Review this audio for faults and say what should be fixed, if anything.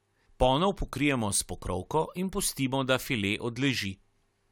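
Nothing needs fixing; no faults can be heard.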